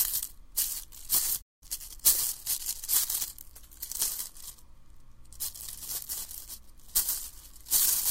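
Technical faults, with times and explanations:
1.41–1.63 s, playback stall: The player most likely ran short of buffered data or had its output thread held up, so nothing reached the output for about 0.2 s. The sound cuts out abruptly in mid-flow, leaving a gap of silence before resuming.
1.63–2.01 s, time-compressed catch-up: To clear the backlog built up during the stall, the player drops small slices of audio and cross-fades across the joins, running at 1.5 times normal speed. The sound comes across hurried but unchanged in pitch.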